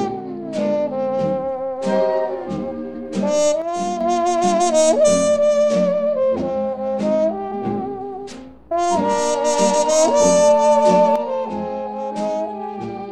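One channel drops out from 3.62 to 4.01 s and again from 11.16 s to the end: the level falls abruptly by about 6 dB, likely because one stereo channel went silent, so the mono sum kept only half of the shared signal.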